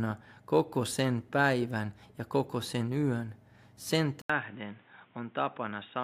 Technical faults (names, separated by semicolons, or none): input switched to a poorer device